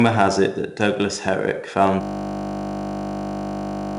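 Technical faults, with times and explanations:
throughout: 4-bit ADPCM compression. A gritty hiss rides on every loud stretch of the speech and sharp onsets sound roughened, with nothing above 10.7 kHz. Each sample is coded as a small 4-bit step from a prediction, and that coarse stepping leaves noise which tracks the level; 88 kbps fits a reduced sample rate.
2.01 to end: system hang loop. From 2.01 s the sound freezes into a steady buzz at 50 Hz, one 20 ms slice repeating exactly until the clip ends. The system stalled while the audio hardware kept replaying the same short ring buffer, and a loop that brief merges into a tone.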